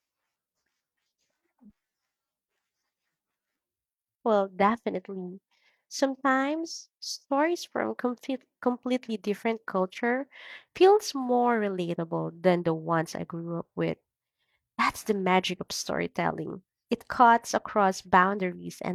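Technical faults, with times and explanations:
No technical faults are heard in this speech clip.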